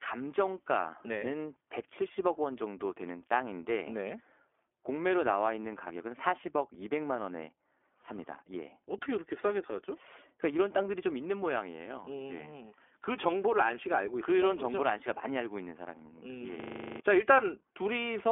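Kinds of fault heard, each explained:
iLBC codec: narrowband VoIP coding in 20 ms frames, so the speech has nothing above about 3.6 kHz and sounds plainly rough and a bit synthetic throughout.
System hang loop: the machine froze while the hardware kept replaying one 40 ms chunk, giving a 25 Hz buzz from 16.6 to 17.0 s that replaces roughly 0.4 s of speech.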